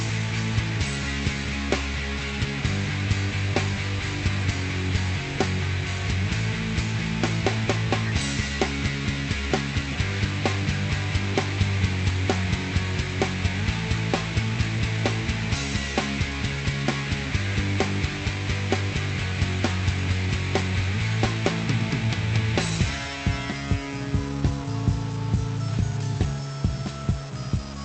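Throughout the clip, one converter or data line is likely stuck at a fixed value. This stuck bit adds noise or distortion over the sound and fills the pauses with noise. Also throughout, there is clock drift between sender and receiver: the sender's clock runs roughly 4 percent fast, so the receiver's jitter buffer keeps overfilling and small timing hiccups recur at uneven intervals. From 20.26 to 27.81 s, repeated timing corrections cut short pieces to catch up, at 106 percent speed. The Opus call path's high end stops near 8 kHz, with coding noise consistent with roughly 48 kbps.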